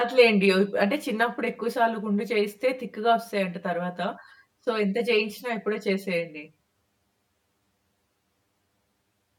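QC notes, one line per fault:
Throughout: channel delay (comb filtering). One side of this speech is trailing the other by around 10 ms. When the two are summed to mono, the shared content cancels at regular points. The first notch sits down near 50 Hz, and more follow roughly every 100 Hz above it. Those fixed gaps carved through the whole spectrum are what give the audio its hollow, slightly phasey, boxed-in quality from start to finish.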